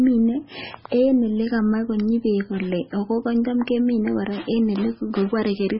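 Speech runs throughout with heavy MP3 compression: nothing above 5.6 kHz, plus watery, swirling artefacts, unlike a plain low-pass filter; likely a very low bitrate, around 16 kbps.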